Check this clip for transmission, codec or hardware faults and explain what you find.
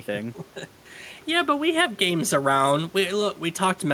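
Nothing in the recording points to a transmission, codec or hardware fault; the speech signal stays continuous and stable throughout.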